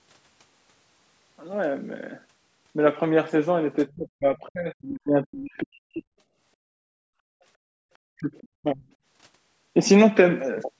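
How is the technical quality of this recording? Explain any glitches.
The recording has three audible glitches from the call's echo cancellation, in a chain whose microphone processing tops out at 8 kHz.

Speech suppressed in double talk, from 3.94 to 6.09 s and again from 8.07 to 8.87 s. The voice sinks sharply, by roughly 40 dB at its deepest, for about two seconds in the first stretch and about half a second in the second. The likely cause is the far end talking at the same moment, so the canceller could not tell this talker from loudspeaker echo and turned everything down.

Background gated by the echo canceller, from 6.95 to 7.06 s. For about a tenth of a second the room sound drops by about 40 dB, leaving a brief hole of near-silence before the ambience snaps back. The canceller clamped the microphone hard while the loudspeaker was playing, then released it.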